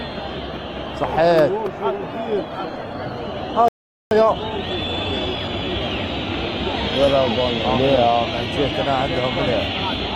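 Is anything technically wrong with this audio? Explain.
Yes, three faults overlap between about 2 and 6 seconds.

From 2.08 s to 6.12 s there is a call bitrate drop. The encoder's rate falls from 48 kbps to 17 kbps and sits at the bottom for about 3 s. With fewer bits the coding coarsens and high frequencies are trimmed, so the audio turns rough and muffled until it recovers.

At 3.68 s the output cuts to silence for 0.43 s, resuming at 4.11 s. This playback stall likely comes from the player's buffer running dry or its thread being blocked, halting the sound in mid-flow before it picks up again.

From 4.11 s to 5.81 s there is a time-compressed catch-up running at 1.25x speed. To drain the backlog left by the stall, the player removes short segments and cross-fades the joins, so the audio sounds hurried at unchanged pitch.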